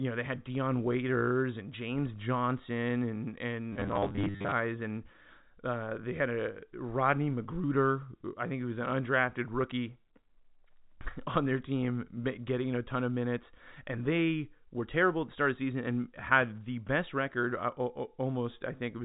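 From 3.73 s to 4.52 s, just after "and and", the speech turns into a rigid metallic buzz at 100 Hz. This is robotic sound from repeated short buffers, likely caused by audio arriving too seldom, so a 10 ms slice is looped for most of that stretch while the real signal is skipped. On a spectrogram, evenly spaced horizontal harmonics at 100 Hz intervals appear, all within the G.711 telephone band that stops near 3.8 kHz. The waveform shows identical 10 ms cycles repeating.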